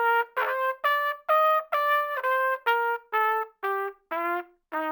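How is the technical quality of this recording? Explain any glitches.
The recording has one flaw. Crude rate conversion runs throughout. Samples were repeated without filtering, which fits a 32 kHz to 48 kHz step. That leaves a gritty, inharmonic fizz about 25 dB below the sound.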